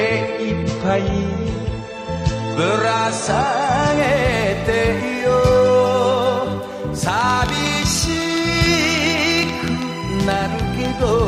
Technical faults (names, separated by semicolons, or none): adaptive stream starting at a low bitrate; train of clicks